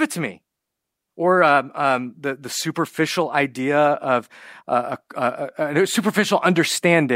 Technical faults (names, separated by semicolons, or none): none